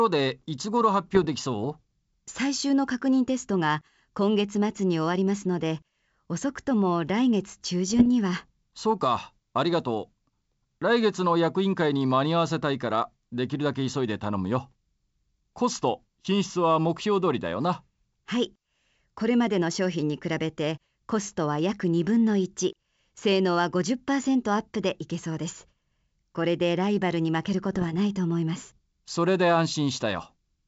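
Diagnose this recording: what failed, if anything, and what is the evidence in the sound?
Bit errors on the ADPCM link of this G.722 call: rough, popping bursts at 1.15–1.29 s, 7.89–8.07 s and 27.69–27.94 s. A small fraction of a percent of flipped bits derails the decoder's predictor and step size, so each burst rings briefly. A waveform shows spiky level jumps; a spectrogram shows vertical broadband smears.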